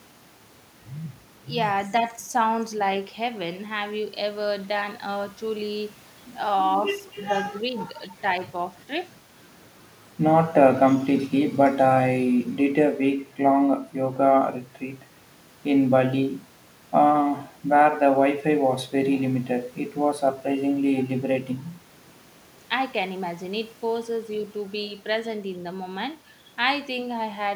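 No technical faults can be heard anywhere in the recording; the speech signal stays continuous and stable throughout.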